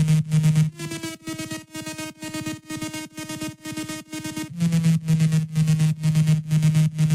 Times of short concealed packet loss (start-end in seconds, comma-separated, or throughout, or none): none